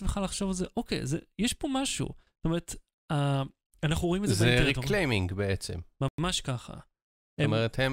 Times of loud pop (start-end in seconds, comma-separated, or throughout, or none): none